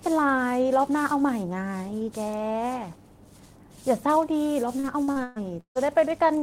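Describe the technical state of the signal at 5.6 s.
Repeated packet loss (robotic sound) covers 4.79 to 5.78 s, including 5.6 s. Five gaps, the longest 156 ms, were each patched by stretching the preceding sound, so about 40 percent of that stretch is concealment. The result is choppy speech with pieces missing.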